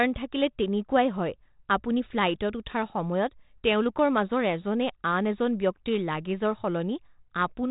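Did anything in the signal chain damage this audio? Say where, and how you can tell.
No, the speech has passed through G.726 at 32 kbit/s, which accounts for the band stopping near 3.8 kHz, and no stage in the chain has done any damage that can be heard.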